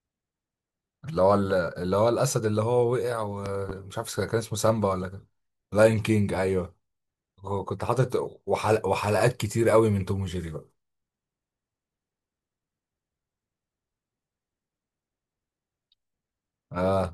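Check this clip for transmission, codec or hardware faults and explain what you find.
One hardware fault is present. At 3.46 to 3.73 s, a loud pop lands twice over the speech. A voltage spike, likely from a plug or switch, jumps about 10 dB above the voice.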